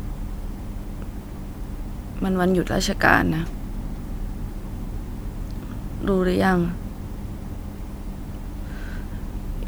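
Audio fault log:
No faults are heard in this speech recording. There is nothing here to flag or correct.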